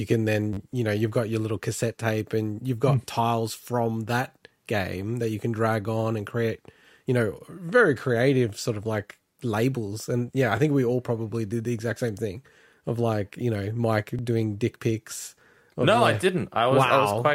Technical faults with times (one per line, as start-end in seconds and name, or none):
0.53-0.58 repeated buffer
10.57 repeated buffer
14.19 repeated buffer